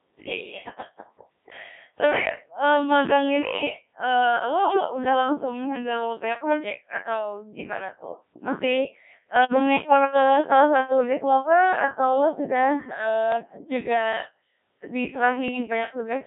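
From start to finish the speech passes through a Codec 2 vocoder, and the heavy damage suggests a rate near 1.3 kbit/s. Only pitch, voicing, energy and a coarse spectral envelope survive, and the decoder rebuilds the voice from sine waves. The result is robotic and buzzy, with the original waveform gone. The audio sits in a narrow line band of roughly 200 Hz to 3.6 kHz.

Bit errors on digital voice radio appear at 9.36 to 9.59 s, 13.32 to 13.64 s and 15.48 to 15.63 s. Each burst is a flurry of corrupted frames at an error rate of a few percent, reaching the low-rate vocoder, where every bit steers a whole frame's parameters. The synthetic voice lurches in pitch, level and timbre, breaking into warbles and bleeps. The lengths point to about five, seven and three frames hit.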